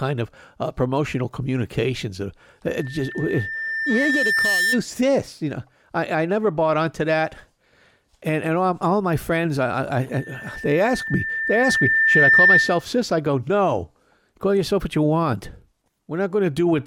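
At 2.66 s a loudspeaker feedback squeal starts: the mic is hearing its own speaker, and at 1.8 kHz the loop gain tops one, so that tone feeds itself. It swells over about two seconds to roughly the level of the speech and cuts out at 4.81 s. The same 1.8 kHz howl returns from 10.11 to 12.85 s, again building for around two seconds, but this time it ends up roughly 10 dB over the speech.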